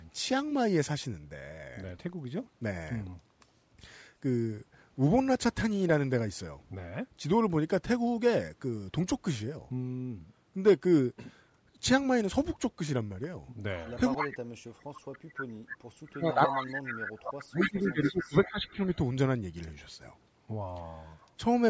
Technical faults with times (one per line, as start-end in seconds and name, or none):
13.77-14.28 echo leak
14.17-18.78 speech suppressed in double talk
15.37-15.44 echo leak
16.24-18.96 echo leak